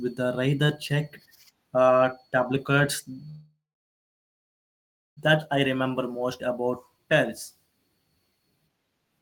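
From 3.29 to 5.19 s there is a call audio freeze: the last sound stretches into a brief fading buzz, then about 1.6 s of silence, likely from delayed packets emptying the jitter buffer. Speech resumes where it stopped, nothing lost but now 1.87 s late. Spectrograms show a smeared frame then blankness; waveforms go flat.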